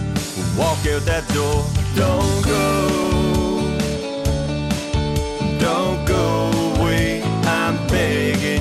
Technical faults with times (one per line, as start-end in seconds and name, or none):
0.00-8.60 MP2 compression
2.98-3.10 DAB burbling
6.74-6.88 DAB burbling